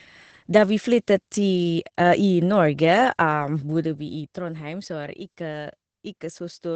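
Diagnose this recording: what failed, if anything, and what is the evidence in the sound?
The failure is at the codec stage: Opus voice compression. Nothing sits above 8.6 kHz for the whole clip. The speech sounds plainly muffled, hoarse and slightly robotic. SILK's coarse linear-prediction coding of a wideband signal causes this, which fits a bitrate near 12 kbps.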